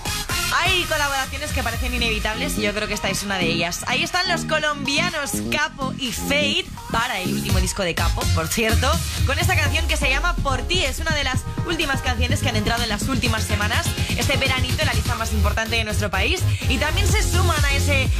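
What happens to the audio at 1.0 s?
Nothing goes wrong at 1.0 s; the audio plays through that moment intact, with no dropout, click or distortion.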